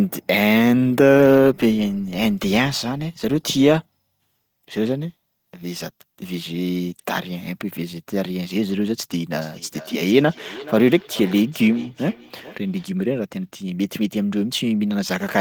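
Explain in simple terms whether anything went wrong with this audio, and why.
From 9.34 to 12.91 s there is feedback echo between two devices. One replays the other's microphone, so sound returns roughly every 0.4 seconds.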